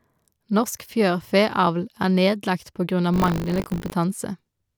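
Speech, with buffer tearing from 3.12 to 3.93 s, just after "er nedlagt på grunn": a rattling 50 Hz buzz, fitting a 20 ms period, as a small slice of each buffer replays audio from a lap earlier. Unlike mains hum, it follows the signal rather than sitting underneath it.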